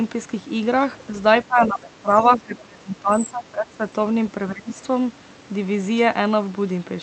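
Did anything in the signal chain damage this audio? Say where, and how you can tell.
Yes. In call processing, a second, much quieter voice comes through at 1.16 to 1.2 s, 2.1 to 2.37 s and 3.1 to 3.19 s, roughly 20 to 30 dB below the main talker. This is the other side's voice leaking through, likely loudspeaker echo the echo canceller failed to remove from the microphone path.

Also in call processing, the talker's level drops by up to about 20 dB from 1.47 to 3.81 s and again from 4.49 to 4.81 s, overlapping the leaked voice. This is speech suppressed in double talk: the canceller likely could not separate talker from echo and turned both down.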